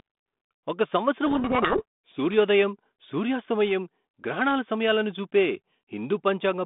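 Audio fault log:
1.26–2.18 s, codec payload misread: the decoder unpacks the G.726 code words with their bits in the wrong order, so well-formed data decodes as harsh distortion that buries the speech. It clears right before "సూర్యోదయం సూర్యాస్తమయం గ్రహణాల సమయాలను".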